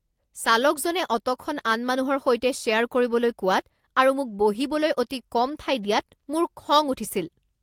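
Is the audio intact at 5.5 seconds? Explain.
No, not quite. Right after "আৰু মোক বহিবলৈ অতি", from about 5.45 to 5.55 s, there's a lost packet rebuilt from error correction. There's no gap, but roughly 60 ms sounds rougher and noisier, since it's played from low-bitrate backup copies, which fits about three lost packets.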